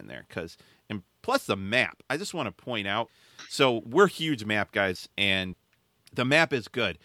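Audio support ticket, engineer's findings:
Speech signal reviewed end to end with no audible technical faults detected on the path.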